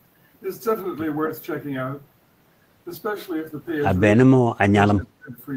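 From 4.16 to 4.76 s and again from 4.93 to 5.37 s, the speech dips sharply, by up to roughly 30 dB. This is likely speech suppressed in double talk: the echo canceller, facing simultaneous far-end sound, attenuated the near-end talker along with the echo.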